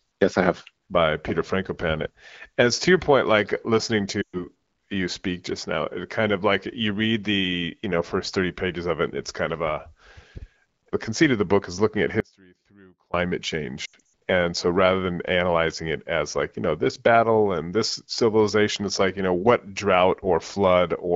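Speech coded as AMR wideband (HD Voice), its light coding character consistent with a rate around 12.65 kbit/s, suffers lost AMR speech frames twice. From 4.21 to 4.48 s about 120 ms goes missing, which fits six 20 ms frames. The decoder stretches the last good pitch and vocal tract shape while the gain falls, so the voice smears and quickly fades before returning weak. From 13.85 to 14.0 s, 180 ms of losses are scattered over about 280 ms, the longest run 80 ms, giving a choppy warble. On a spectrogram the harmonics freeze into flat, dimming horizontal streaks. The waveform envelope sags toward zero, then recovers at low amplitude. Between 12.20 and 13.14 s there is an audio dropout to a faint residue. The speech cuts off abruptly for about 0.94 s, leaving only faint sound around 30 dB below the normal level. This is likely a brief loss of the wanted signal while the path downstream stayed live. 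The waveform shows a sharp-edged near-flat stretch, and the spectrogram shows a hard-bounded pale band instead of a gradual fade.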